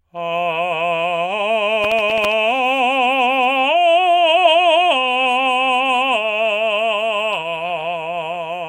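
From 1.84 to 2.32 s the music carries processor overload crackle: the processor misses a run of buffer deadlines, each miss replaying a hard-edged sliver of old audio. The dense, gritty texture suggests about ten tiny buffers missed across the stretch, unlike a single isolated dropout.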